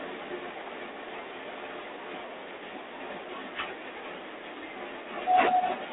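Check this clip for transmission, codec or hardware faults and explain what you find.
Two faults are present: codec damage across the whole clip and two stretches where the audio plays in the wrong order.

G.726 ADPCM, throughout: each sample is coded as a small difference from an adaptive prediction, and the coarse steps leave a harsh, rasping hiss that rises and falls with the speech level. The line is confined to roughly 300 to 3600 Hz, with nothing above 3.8 kHz. The roughness fits the 24 kbit/s mode.

Chunks out of order, 0.5 to 1.5 s and 3.0 to 5.0 s: 500 ms blocks of audio were delivered or written late and play after material that should follow them. Nothing is missing, but the sequence jumbles, and there are hard joins at each splice. The first stretch sounds like a block displaced by one position; the longer second stretch sounds like one displaced by three.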